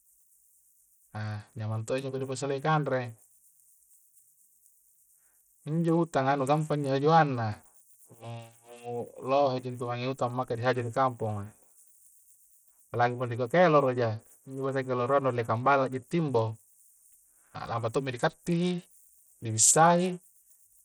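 From start to finish, the audio has likely passed through a starved Bluetooth SBC compression stage, with a bit pool small enough to fit a rate of around 80 kbps. The codec splits the signal into a few wide sub-bands and hands out bits without regard to hearing, so the weak upper bands get almost nothing. On this speech the treble thins and flickers in and out, and a gritty, grainy noise with aliased edges clings to every phrase.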